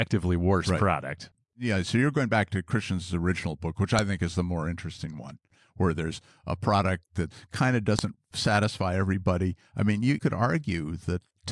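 Headers from 4-second WAV pieces were played as samples, a file header played as audio, giving sharp clicks at 3.99 s (after "original book which") and 7.99 s (after "product that kind of").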